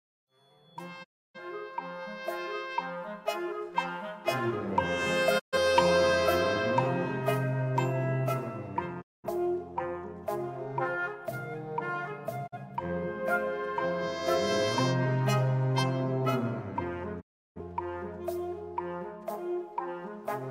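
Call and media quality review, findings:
Digital broadcast dropout, five times: 1.03–1.40 s, 5.38–5.58 s, 9.00–9.28 s, 12.46–12.56 s, 17.20–17.61 s. Audio fades out over about 20 ms, goes silent, then resumes with material missing. Holes last roughly 300, 130, 210, 40 and 340 ms, which fits whole frames of about 43 ms being discarded. Component: receiver decoder. Mechanism: frames lost or failing checksum, output muted until valid frames return. Lost content is not recovered.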